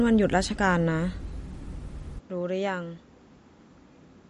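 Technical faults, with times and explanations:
throughout: MP3 compression. Plainly audible watery, swirly artefacts and nothing above 11.2 kHz, likely from low-bitrate MP3 encoding, which fits about 48 kbps.
2.19 to 4.29 s: input switched to a poorer device. The sound dulls, drops about 5 dB and loses everything above 7.6 kHz, with no gap, likely from a narrower-band input taking over.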